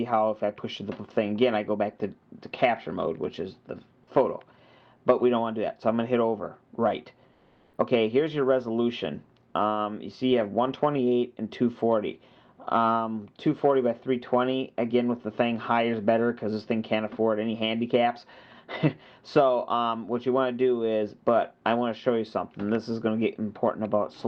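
At 7.33 to 7.69 s, about 360 ms, the background drops out and comfort noise takes its place: a flat, featureless hiss roughly 2 dB quieter. That's likely Opus DTX stopping transmission in a quiet gap, leaving the receiver to synthesise filler noise.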